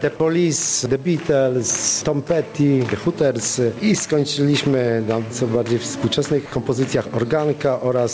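Gain pumping runs through the whole clip. The sound is squashed, with the level swinging by about 15 dB. The likely cause is input gain set far too high, with a fast limiter clamping down on each peak. The waveform looks squashed, with flattened peaks and a raised noise floor between them. A spectrogram shows the background band darkening and lightening in step with the loud events, all of it stopping at 8 kHz as the G.722 path does.

From 6.46 to 6.52 s, sound is dropped by the voice detector. For 60 ms the audio gives way to steady comfort noise, and about 40 ms of real sound is lost before the detector triggers again. The likely cause is the sender mistaking quiet sound for background. On the waveform this appears as a short flat, even stretch. On a spectrogram it shows as a smooth, structureless patch.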